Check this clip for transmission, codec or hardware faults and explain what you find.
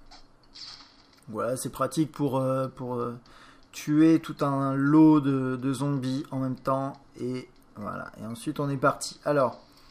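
No transmission, codec or hardware fault can be heard anywhere in the clip; the signal stays continuous and stable throughout.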